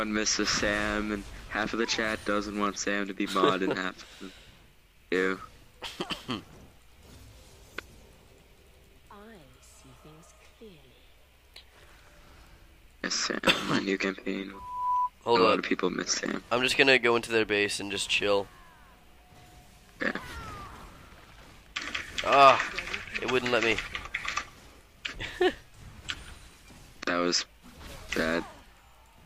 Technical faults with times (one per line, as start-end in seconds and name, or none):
14.53-15.10 loudspeaker feedback squeal